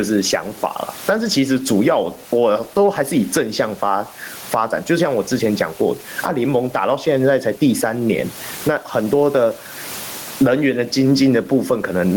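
Speech throughout, with gain pumping: the level swings around 20 dB, likely from excessive input gain hitting a fast limiter, and the room noise sits about 33 dB below the voice.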